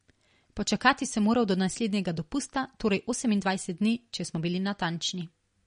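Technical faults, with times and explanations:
Throughout, MP3 compression: speech is band-limited with nothing above about 10.1 kHz, and watery, swirling artefacts are plainly audible, likely from a low-bitrate encode around 40 kbps.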